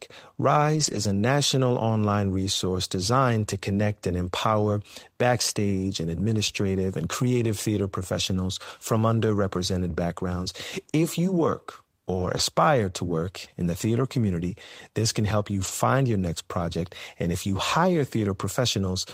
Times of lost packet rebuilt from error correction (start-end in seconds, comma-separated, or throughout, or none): 0.75-0.97, 12.13-12.39, 15.63-15.69